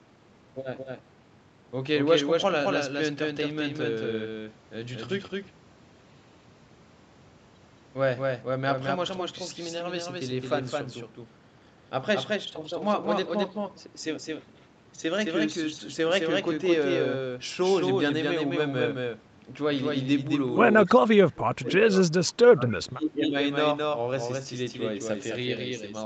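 A speech recording in which every sound is followed by a doubled audio track, a full-band copy roughly 5 dB quieter and about a fifth of a second late, likely from a second capture path. On a spectrogram this shows as each syllable's pattern repeated just behind itself with no smearing or decay. From 20.85 to 22.38 s and again from 22.54 to 23.34 s the speech is suppressed in double talk, dropping by up to about 30 dB and then about 25 dB. This is likely an echo canceller ducking the talker while the far side spoke, and it would appear as deep troughs in the waveform envelope and faded high bands on the spectrogram. Within that second stretch, at 22.68 to 22.73 s, a brief echo leak lets through a faint scrap of voice about 25 dB down, arriving 275 ms late. It is likely residue the canceller missed and shows as an isolated smudge. The call codec's band limit is also visible, with nothing drawn above 8 kHz.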